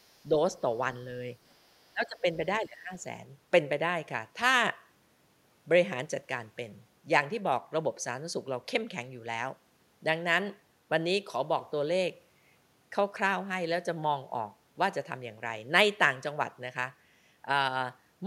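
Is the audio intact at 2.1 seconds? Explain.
No. From 1.9 to 2.38 s the speech dips by around 20 dB. This is likely speech suppressed in double talk: an echo canceller mistook overlapping talk for echo and ducked it. The level dips rather than cutting to clean silence like a packet dropout.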